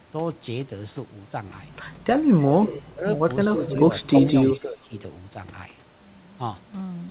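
From 2.40 to 2.92 s a faint, delayed copy of the speech trails the talker by about 0.32 s, sitting about 15 dB under the direct sound. This is an echo leak, likely from a far end playing the call over a loudspeaker whose echo canceller let part of its microphone pickup return down the line. The same ghost returns from 3.65 to 3.78 s and again from 4.00 to 4.59 s, the last stretch louder at about 10 dB below the speech, each time at the same one-third-second lag.

Overlapping the first echo, from 2.82 to 3.05 s, the talker's level sinks by up to about 15 dB for well over a tenth of a second in total. This is speech suppressed in double talk, likely the canceller failing to tell the live talker from the returning echo and turning everything down together. A shallower dip of about 5 dB follows from 3.56 to 3.64 s, just before the second echo. The longest one runs from 4.52 to 4.94 s, pulling the speech down by up to about 15 dB for about 0.4 s in total as the loudest echo fades. 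Throughout, the sound stops at 4 kHz, which fits a 64 kbps G.711 mu-law call path.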